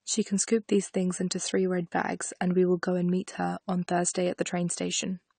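Low-bitrate audio saved at a high bitrate, throughout the clip: the speech has nothing above about 9.1 kHz, and the smeared, swirly coding artefacts of a heavily compressed source stay audible across all of it. The likely cause is a low-bitrate encode, one that fits a coarse AAC stage, later saved again as a high-bitrate MP3. The second encode can't restore the detail or the top octave the first one discarded, so the roomy file still sounds dull and grainy.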